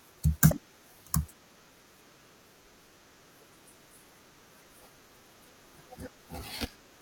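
At 1.52 s and again at 6.72 s, the speech breaks into a brief glitch lasting a few hundredths of a second. Both are damaged data in a compressed stream. Corrupted bytes made the decoder misread frames and lose sync before recovering.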